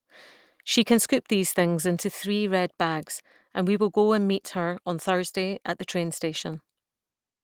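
Listening to the speech in this recording, nothing technical stood out.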